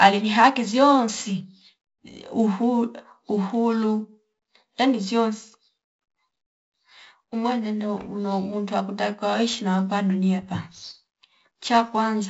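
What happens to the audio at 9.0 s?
At 9.0 s you're hearing the 4-bit ADPCM compression that runs through the whole clip. Each sample is coded as a coarse step from a prediction, so a gritty hiss rides on the louder speech, with roughness on sharp onsets. Nothing above 7.7 kHz survives, which points to a low sample rate, with the stream at 64 kbps.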